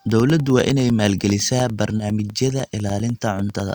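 From 0.10 s to the end, the speech carries periodic USB or driver dropouts: every 0.1 s a background task stalls the audio path, and a tiny slice of signal is replaced by silence. The result is a steady ticking rhythm audible whenever the talker is sounding.

At 1.97 to 2.01 s there is a short concealed packet loss. About 20 ms of audio never reached the decoder, so the receiver synthesised a continuation of the preceding sound and cross-faded back, leaving a brief smear or wobble in the speech.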